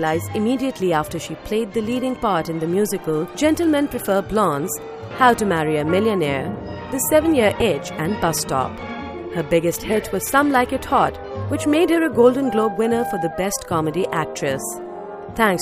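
At 7.59 to 7.62 s the sound skips forward, and in the gap comes a brief glitch lasting roughly one 26 ms frame, rather than a clean join. This is likely a broken MP3 bit reservoir: material was cut out of the stream, so the first frame after the cut reached back into the reservoir for data it had borrowed and decoded bytes belonging to a different frame instead, producing that short glitch.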